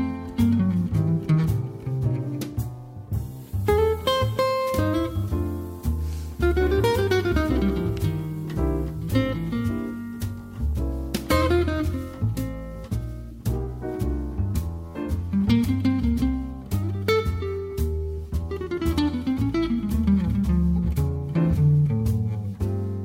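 Nothing in this audio is technically wrong, so there are no times or causes to report.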